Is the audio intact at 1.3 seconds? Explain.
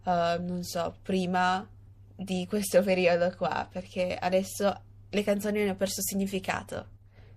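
No, at 1.3 seconds the speech carries the same watery, swirly texture heard through the whole clip, with chirpy s sounds. That's likely MP3 compression, at a rate that sounds like about 64 kbps, dropping weak frequency detail.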